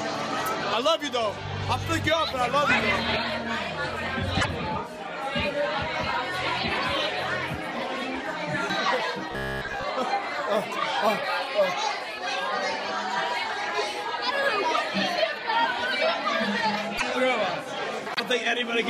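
At 4.40 to 4.46 s, a likely broken MP3 bit reservoir: frames seem to have been cut, so the next frame's look-back fetches bytes belonging to other frames. The audio jumps ahead, and for about two 26.1 ms frames it comes out as a chirp, noise burst or brief hole.

From 9.32 to 9.84 s, robotic sound from repeated short buffers is likely to blame: with fresh audio arriving too rarely, the last short stretch is replayed for most of this span while real audio is skipped. The repeats impose a rigid 66.7 Hz metallic buzz, which fits a 15 ms buffer.

The same broken MP3 bit reservoir fault recurs at 16.97 to 17.03 s and 18.14 to 18.20 s, again skipping ahead with roughly two frames of garbled sound.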